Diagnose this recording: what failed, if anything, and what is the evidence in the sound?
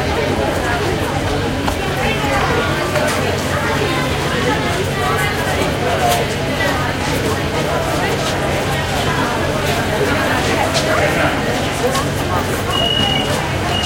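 The failure is in the driver or buffer stage: chunks out of order. At 8.97 s there is a brief jumbled flicker. One short block of audio, about 5.8 ms long, was delivered one chunk late. It plays after the block that should follow it. No audio is lost, but the sequence is scrambled. That creates three hard joins. A chunk that short fits a small buffer.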